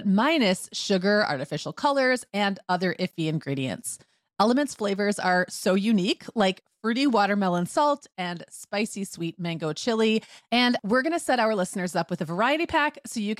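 At 3.11 to 3.13 s, just after "artificial colors and other", the speech stops dead for 20 ms and resumes: a gap between chunks. The audio was delivered in blocks of about 5 s, and at this join a short stretch of silence was left between blocks. Nothing is lost, but the flow breaks with a hard-edged hole. On a waveform it is a flat line with abrupt edges; a spectrogram shows a thin, empty vertical band.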